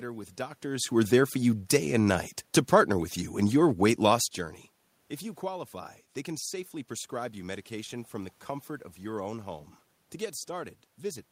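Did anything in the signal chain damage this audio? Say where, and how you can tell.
No, the chain caused no damage.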